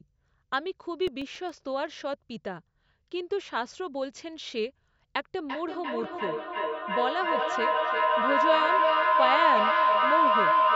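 From 0.93 to 1.49 s, five very short ticks, each only a couple of milliseconds, punctuate the speech. These are CD scratch ticks, where a disc blemish defeated error correction once per revolution. From 5.49 s to the end, a tone around 1 kHz swells to about 5 dB above the speech, with the loop repeating roughly every 0.3 s. This is feedback howl: a microphone-to-loudspeaker loop gained level on each pass until it rang.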